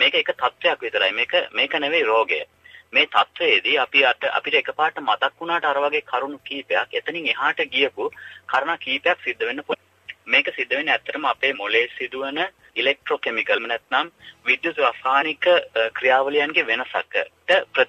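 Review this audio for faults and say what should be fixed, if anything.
There are three spots with compressed frames skipped: at 8.53 s, from 9.71 to 9.75 s, and at 15.21 s. Whole frames of the encoded stream never made it to playback, either lost from the file or rejected by the decoder as corrupt, so the audio lurches forward. That's roughly 40 ms at the first and last spots and around 150 ms in the middle one. To prevent it, check file integrity after transfer and re-encode or re-fetch from a clean source.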